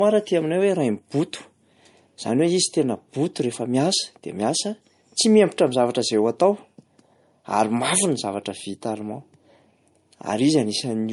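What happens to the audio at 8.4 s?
At 8.4 s, as throughout, this is likely low-bitrate audio saved at a high bitrate: an earlier MP3 pass stripped everything above 11.1 kHz, leaving the speech dull.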